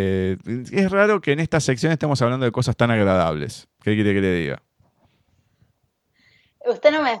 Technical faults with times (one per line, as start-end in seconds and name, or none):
none